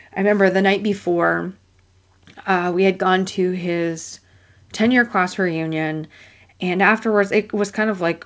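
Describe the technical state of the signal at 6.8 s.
At 6.8 s the speech is intact, with only the ordinary band limit of the G.722 call path, which leaves nothing above 8 kHz.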